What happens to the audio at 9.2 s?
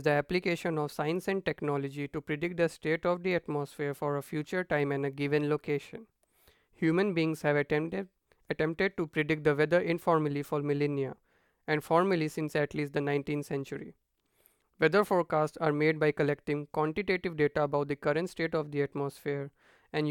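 At 9.2 s the speech carries on cleanly, with no dropout, click, distortion or other fault.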